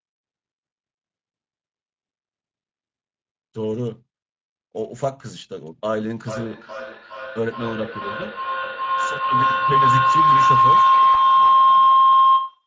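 A speech recording runs through the Speex codec from start to finish, and the damage is plainly audible. The voice sounds hoarse and grainy, which fits a mid-range Speex setting of about 17 kbps. On a spectrogram, harmonics look smeared, and the spectrum ends at the call chain's 8 kHz limit. From 6.28 s to the end, a feedback howl builds as a microphone-to-loudspeaker loop gains level on each pass. It settles near 1 kHz with a loop delay of roughly 0.4 s, peaking about 11 dB above the speech. A spectrogram shows a bright horizontal line near 1 kHz, and the waveform envelope grows. At 11.13–11.16 s, VoIP packet loss concealed by the speech codec fills a gap consistent with one lost 20 ms frame. The decoder extrapolates the last pitch and filter, producing a brief fading stretch that appears in the waveform as a short dip in level.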